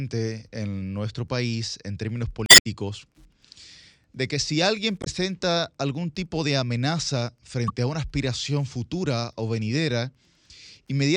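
Throughout the speech, Wi-Fi interference produces a faint, steady ticking about 50 dB below the speech. The audio circuit is rectifying a nearby radio's beacon every 102.4 ms, and that strict regularity sets it apart from random crackle.

Damaged data in a compressed stream makes the decoder lose frame sync. The faults fall at 2.46–2.66 s after "nuestro país en términos", at 5.00–5.07 s after "de que si alguien", and at 7.68–7.70 s between "algún tipo de amenaza" and "a una aspiración futura".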